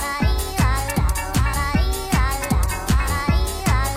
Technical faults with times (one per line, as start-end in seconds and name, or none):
none